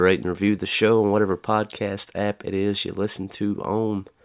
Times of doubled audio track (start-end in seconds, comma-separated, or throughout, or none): none